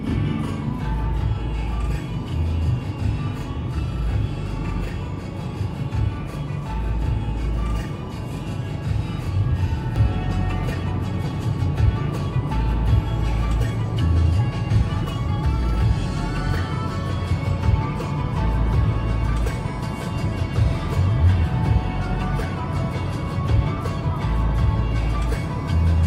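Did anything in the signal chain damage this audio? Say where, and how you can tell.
Yes. From 0.0 to 9.96 s the sound has a channel delay (doubling). Every event arrives twice, the second copy 40 ms after the first and at the same level. This points to the driver or buffer stage. One channel was held back by a long buffer before the two were summed to mono. At 40 ms the late copy does not blend into a comb tone. It stands apart as a doubled attack.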